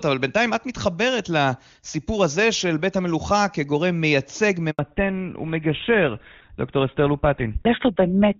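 At 4.71 s there's a handover gap: the call hops networks and no speech frames arrive while it switches, so the sound just drops out for about 80 ms, until 4.79 s. Whatever was said in that slice is gone.

Right after, from 4.79 s to the end, you get a fallback to narrowband. Before the gap the HD Voice sound is clean and full, which fits AMR-WB at its top rate. After it, everything above 4 kHz vanishes, pointing to the old GSM full-rate codec, so it turns dull and rougher.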